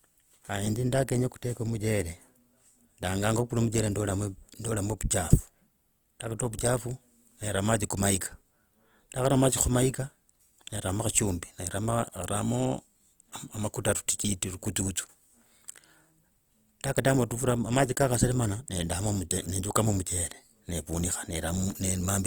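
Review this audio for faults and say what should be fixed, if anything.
The whole clip carries what sounds like Opus compression, most likely the cause of the grainy, plainly rough texture running through the speech from start to finish. The bandwidth is still full, reaching up to about 20.2 kHz, so nothing is muffled. At a thin bitrate the encoder keeps each band's energy but fills the detail with folded or noise-like content. That's why you hear hiss-tinged roughness rather than swirl, which fits around 24 kbps in its music-style mode. To prevent it, export from the original source or encode Opus at a comfortably higher bitrate.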